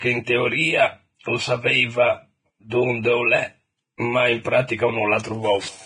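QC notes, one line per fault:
Throughout: Vorbis compression. The speech is hissy and grainy, and its tones sound roughened. Nothing is heard above 9.7 kHz. The damage is heavy and fits a low bitrate near 22 kbps. The likely cause is a transform codec quantising the treble coarsely into noise.
2.70 s and 3.97 s: pre-echo. A brief hiss, about 17 to 19 ms long, comes just before each sharp attack, and the attacks sound softened. The codec spreads noise across a whole block, so noise meant for the loud onset also fills the quiet moment before it.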